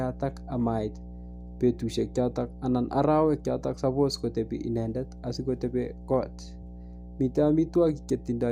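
Speech runs over a steady mains hum for its whole length. The tone sits at 60 Hz with some low harmonics. It is loud, roughly 15 dB below the speech. A ground loop or nearby transformer is coupling the power line into the signal.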